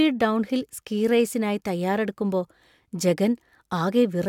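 No technical faults can be heard anywhere in the speech.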